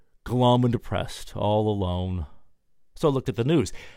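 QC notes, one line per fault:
No faults found in this speech clip. Nothing in it calls for a timed entry.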